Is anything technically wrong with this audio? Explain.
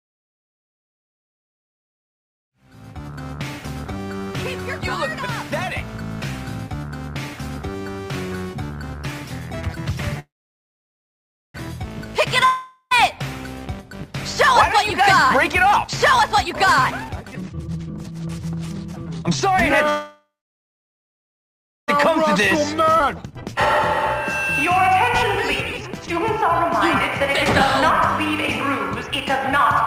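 Yes. The audio shows several network and jitter-buffer faults.

Call audio freeze at 10.19 to 11.56 s and again at 19.89 to 21.90 s. Packets were likely held up, so the jitter buffer ran dry. The last sound is stretched into a fading buzz, then near-silence for about 1.3 s and 1.6 s. Playback resumes where it stopped, so nothing is lost, but each freeze adds that wait as delay.

Long network dropout at 12.45 to 12.93 s. Audio likely stopped arriving for almost half a second. A brief fading continuation of the previous sound gives way to about 70 ms of silence. Playback then returns further along, and roughly 460 ms of audio never plays.

Jitter buffer speed-up at 15.29 to 19.23 s and 22.08 to 29.57 s. The receiver trimmed out tiny pitch-period slices over and over to drain excess buffered delay. The first stretch runs at 134% speed, with about one and a half seconds removed, and sounds noticeably rushed. 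The second runs at 110%, about 0.7 s removed. Pitch stays unchanged in both.

Skip ahead at 22.99 to 23.02 s. A stretch of audio was dropped while later audio was already waiting. Roughly a second of material vanishes, and the two sides are spliced with only a few milliseconds between them, so the sound lurches forward abruptly.

The gradual fade-in that ends at 3.45 s is a smooth, click-free editorial ramp.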